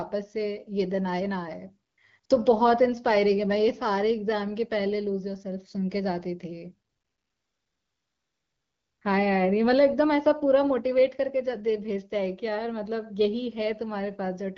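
Speech with AMR comfort noise at 1.89–1.97 s, 2.19–2.23 s, 2.25–2.29 s and 6.89–9.01 s. The phone judged these moments silent and stopped sending speech. Steady synthetic noise replaced the real background.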